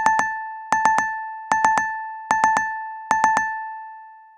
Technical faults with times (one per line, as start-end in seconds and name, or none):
none